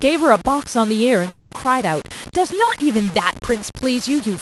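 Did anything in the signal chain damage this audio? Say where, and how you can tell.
Yes. At the sample-format conversion stage there is low bit depth without dither throughout the speech. Grainy distortion tracks the voice, with quantisation error only about 15 dB below the signal. That likely points to truncation to roughly 5 bits. Unlike steady hiss, this grit rises and falls with the sound.

At the network and jitter-buffer stage there is a call audio freeze from 1.29 to 1.53 s. A fading continuation of the last sound fills about 220 ms, then the speech resumes where it stopped, with nothing missing. That points to a likely late-packet stall rather than packet loss, which would drop content.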